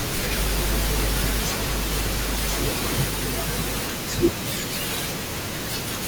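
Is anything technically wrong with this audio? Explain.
Yes. A doubled audio track is present from the start to 3.08 s. A dry copy trails about a second behind, a few dB quieter. A slower second capture path is the likely cause.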